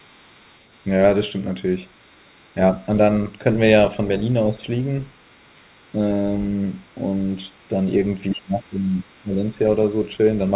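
Other side's voice leaking through at 0.00 to 0.84 s, 1.89 to 2.84 s, 5.02 to 7.68 s and again briefly at 9.12 to 9.24 s: in this speech clip a second, very faint voice sits far below the main talker, roughly 35 dB down. The likely cause is loudspeaker playback of the far end reaching the microphone, with the echo canceller leaving a residue it should have removed. Speech suppressed in double talk runs from 7.69 s to the end at about 10.56 s. Here the talker's level sags by up to roughly 15 dB, losing presence in uneven pieces. This is likely the canceller reacting to both sides being active at once: unable to tell its own talker from the returning echo, it attenuates everything, and the near-end speech is pulled down. Across the whole clip the audio carries nothing above 4 kHz, which fits a narrowband G.711 mu-law call path.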